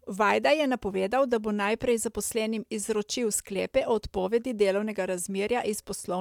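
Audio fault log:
Nothing to log here, as the speech runs along without a single fault turning up anywhere in it.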